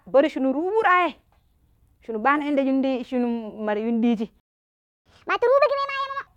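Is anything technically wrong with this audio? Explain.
Yes. The speech has two linked playback faults.

At 4.40 s a playback stall begins. The audio drops to silence mid-flow and stays silent until 5.06 s, a gap of about 0.66 s. The likely cause is that the player ran short of data or its output thread was held up, so nothing reached the output. The sentence stops abruptly. It then resumes, with no content skipped.

From 5.06 s to 6.27 s there is catch-up at higher speed. The player works through the audio held up by the gap by resampling it at 1.5 times normal speed. That shortens the material to recover most of the lost time. Because resampling scales pitch along with tempo, the voice rises by roughly seven semitones and sounds hurried and squeaky. Speed and pitch return to normal at 6.27 s.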